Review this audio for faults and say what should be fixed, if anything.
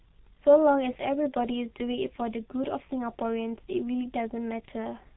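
Throughout the clip, the speech has been squeezed through the G.723.1 codec at a very low rate, which fits roughly 6.3 kbit/s. It works in coarse 30 ms frames and discards everything above 3.9 kHz, so the heavily damaged result sounds muffled and hoarse, with smeared consonants. Carrying the call on a wideband codec such as G.722 or Opus at a higher bitrate would prevent this.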